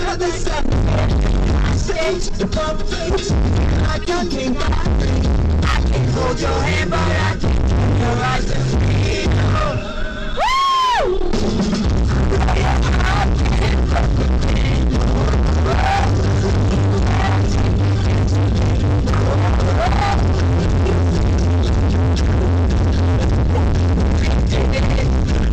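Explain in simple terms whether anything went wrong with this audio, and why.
Some of the compressed data was damaged, and the player decoded those broken pieces anyway. This is a corrupt frame decoded fault. The scrambled data sends sound to the wrong pitches for a split second, so you hear a short squeak or burst of noise. It happens four times: at 4.02 to 4.08 seconds, 9.11 to 9.14, 13.63 to 13.67, and 23.55 to 23.59. Each burst is fairly loud.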